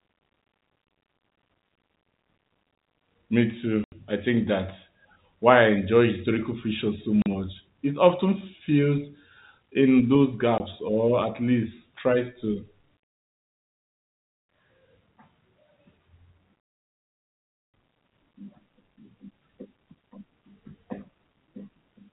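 Speech over a telephone-band G.711 line has packet loss filled with silence. Hard-edged gaps fall at 3.84–3.92 s before "I think that's why", 7.22–7.26 s after "enjoy historical fiction so", and 10.58–10.60 s. The 80, 40 and 20 ms holes fit lost 20 ms packets.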